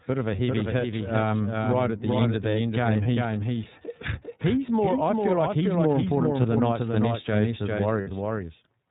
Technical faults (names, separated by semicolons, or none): doubled audio track; iLBC codec; lost iLBC frames